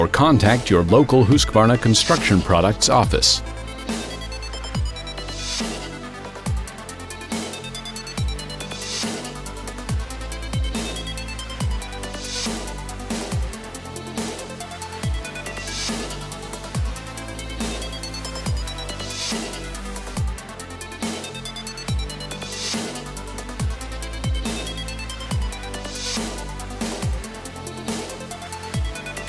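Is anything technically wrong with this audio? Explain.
No, there is nothing technically wrong with this audio; no faults can be heard anywhere in it.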